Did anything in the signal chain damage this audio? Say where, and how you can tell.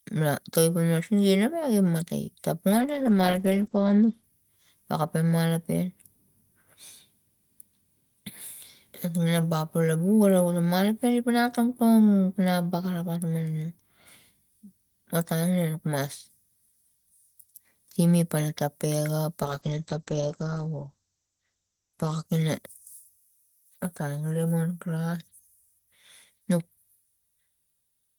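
Yes. Two call bitrate drops at the network-to-codec stage, 2.71–5.07 s and 19.43–23.25 s, cut encoding from 32 to 10 kbps, roughening the speech and muffling everything above 8 kHz.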